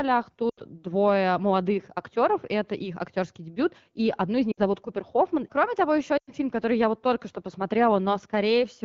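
Lost AMR speech frames: corrupted frames forced the wideband decoder to extend the last good frame with falling gain, so speech smears, fades and returns weak at 0.49–0.61 s (80 ms), 4.52–4.61 s (60 ms) and 6.17–6.33 s (100 ms).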